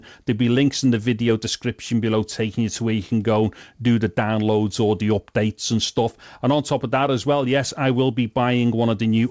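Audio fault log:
No faults are heard anywhere in the clip. The sound stops at 8 kHz, which fits a wideband call path using the G.722 codec.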